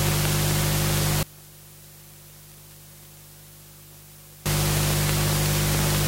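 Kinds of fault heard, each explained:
One channel inverted: From 1.23 to 4.46 s the everyday sound drops by about 24 dB, background and all, then returns. That's likely one stereo channel flipped in polarity, so everything shared between the two sides cancelled when they were summed to mono, leaving only their small differences.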